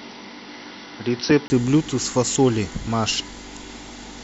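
Until 1.5 s the speech is dull, capped at 5.9 kHz, then opens up after a 20 ms gap, likely an input switched to a poorer device.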